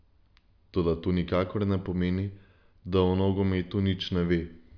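Nothing in this bit of speech jumps out as a technical fault; it just runs along without a hitch.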